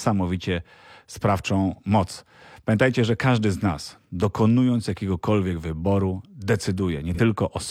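At 7.14 s, near the end of the speech, there is AAC frame loss with concealment, lasting until 7.19 s. That gap of about 43 ms fits a single lost frame. With no new data arriving, the decoder filled the hole by reusing the last good spectrum, rebuilding its energy with altered phase rather than the real signal. The result is a brief smeared, noisy or phasey patch in place of the original sound before clean decoding resumes.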